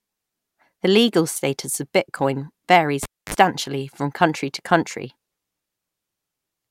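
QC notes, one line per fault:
3.03–3.34 s, cable pulled and plugged in: a live cable was pulled from its socket just after "status of bitcoin varies" and pushed back in before "from country to country". Breaking the signal path throws a pop, then leaves near silence for about 264 ms. As the plug goes back, the tip touches first without a ground, so about 47 ms of 50 Hz mains buzz bursts through before a second pop as full contact restores the sound.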